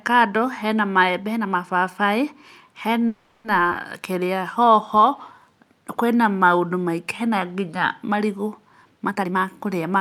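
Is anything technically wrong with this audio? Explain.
Yes, there are four network playback faults in this speech.

From 3.07 to 3.46 s there is a call audio freeze. The last sound is stretched into a fading buzz for 370 ms, likely because delayed packets left the jitter buffer empty.

At 3.70 to 3.73 s the audio makes a skip ahead. About 150 ms of speech is dropped, and the two sides are joined almost directly.

From 4.00 to 5.52 s a jitter buffer slow-down plays speech at 91% speed. Repeated pitch periods add 139 ms, so sounds are drawn out at the same pitch.

From 9.10 to 10.0 s a jitter buffer speed-up runs speech at 130%. Roughly 300 ms of short pitch-period pieces are cut, and the speech sounds hurried.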